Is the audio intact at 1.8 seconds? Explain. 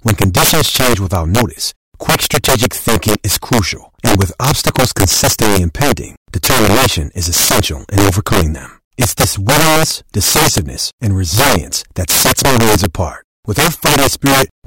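No, integer overflow runs through the whole clip: speech pushed about 8 dB too hot wraps to the opposite sign instead of limiting, so a small share of peaks snap into harsh cracks.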